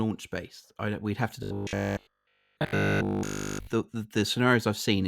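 Right after "I we'd have to", from 1.43 to 3.67 s, the speech collapses into robotic sound from repeated short buffers: a rigid, metallic 50 Hz buzz that loosely tracks the words until "the the". The likely cause is audio arriving too slowly, with essentially every stretch filled by looping a 20 ms chunk.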